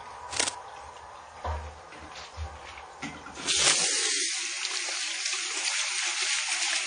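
Throughout the clip, nothing is present above 9.6 kHz, so the top end sounds dull and closed in. The remaining detail has a smeared, swirly texture, and it is grainy in a way that no single encoding would produce. The likely cause is transcoding between lossy codecs. The sound points to a WMA-style encode at a moderate rate, then an AAC-LC re-encode at a low rate. Each pass adds its own damage to the last.

From 0.30 to 0.57 s, a burst of dense, uneven scratching sits over the sound. It is roughly as loud as the sound itself. A second burst runs from 3.57 to 4.08 s, with the same rustling, crackly character and a similar level. This is cable scratch noise. Its likely cause is a worn cable, connector or control being moved. As the contact shifts, its resistance jumps about rapidly and injects noise.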